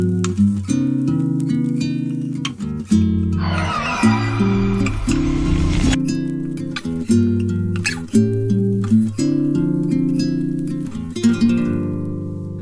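From the start to 3.86 s the audio runs at the wrong sample rate: the samples are clocked out slower than they were captured, with no conversion, so speed and pitch fall together. Playback runs at 0.919 times normal speed and sits about 1.47 semitones flat, which fits 24 kHz material played at 22 kHz. The passage sounds slightly slowed and lowered, then snaps to normal pace and pitch after 3.86 s.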